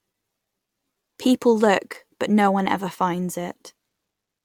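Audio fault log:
Nothing stood out on listening to the speech in this recording.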